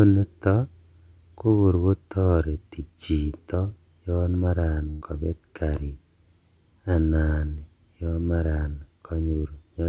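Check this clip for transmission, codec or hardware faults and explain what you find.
One transmission fault stands out in the speech, which comes over a call path whose band stops at 4 kHz, as G.711 mu-law coding gives.

From 4.90 to 5.03 s the last sound stretches and fades, then speech jumps ahead with 120 ms gone. This is a burst of packet loss, concealed by extending the preceding audio.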